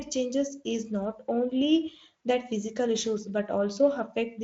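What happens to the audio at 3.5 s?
At 3.5 s the speech plays through cleanly, with no dropout, click or other fault.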